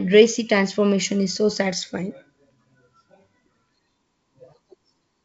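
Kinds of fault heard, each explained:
No kinds of fault are heard in this speech, so there are none to explain.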